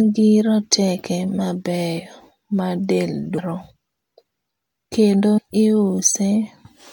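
Damaged data in a compressed stream shows up in this speech recording from 5.37 to 5.39 s, a brief burst of roughly 20 ms that breaks sharply from the surrounding audio. At that point the encoded bytes reaching the decoder were wrong, so it could not rebuild the frame properly and lost its place in the stream. It then had to search forward for the next valid frame header, and the garbled output produced during that search is what gives the short, artificial blip.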